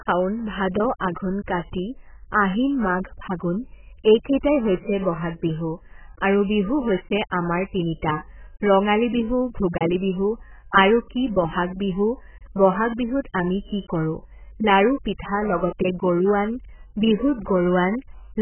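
Speech, cut off above 3.1 kHz throughout, dull and warbling; a spectrogram shows a flat ceiling, likely from heavy, very-low-bitrate AAC compression.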